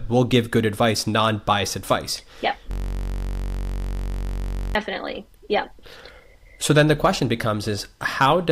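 From 2.71 to 4.75 s, just after "advice yep", a system hang loop repeats one 21.33 ms slice at 46.9 Hz, producing a steady buzz, which fits a 1024-sample buffer.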